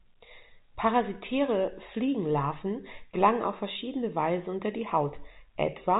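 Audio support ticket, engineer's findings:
No fault found; speech is carried over G.711 A-law telephone coding at 64 kbps, with nothing above 3.8 kHz, as expected for a telephone path.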